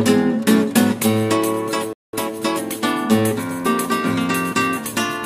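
At 1.93 s the sound drops to silence for 200 ms, until 2.13 s: a playback stall, likely the player starved of data or its thread blocked.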